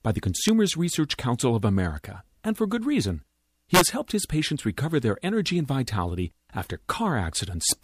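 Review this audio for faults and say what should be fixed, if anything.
There's integer overflow in three spots: a crack at 0.49 s after "by the", a longer burst from 3.75 to 3.81 s between "and for good reason" and "helped his patients recover", and another crack at 7.70 s. The peaks were pushed only about 1 to 3 dB past full scale, but instead of being clamped they wrapped around to the opposite sign, so each one slams across the whole range and comes out as a harsh snap rather than ordinary clipping. The fix is to saturate the sum or gain stage, or leave enough headroom that peaks never exceed the integer range.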